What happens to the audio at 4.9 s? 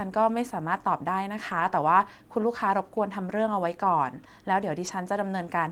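A lost packet rebuilt from error correction occupies 4.87 to 4.89 s. About 20 ms went missing, which fits a single lost packet. The next packet carried a low-bitrate backup copy, so the decoder played that instead. There is no gap. The speech turns briefly rougher and noisier.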